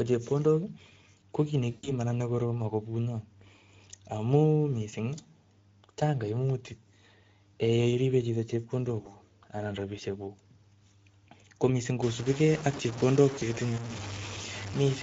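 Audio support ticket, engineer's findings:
Speex codec, whole clip: speech hoarse, noisy, with plainly audible CELP coding damage. Excitation starved of bits. Sound points to a mid-quality Speex mode near 16.8 kbps, typical of legacy VoIP/game chat.

VoIP packet loss concealed by the speech codec, 1.71–1.92 s, 9.01–9.08 s (right after "yeiribe chito") and 13.39–13.43 s: speech stretched and fading, then stays weak briefly. Decoder extrapolating last pitch/filter across gaps of 120, 40 and 20 ms, consistent with six, two and one lost 20 ms frames.

Low bit depth without dither, 12.02 s to end (after "ko missing'"): gritty, grainy distortion tracking the signal; quietest passages sputter or drop out. Likely truncation to about 5 bits with no dither. Error sits roughly 10 dB below signal and correlates with it, hence the grain.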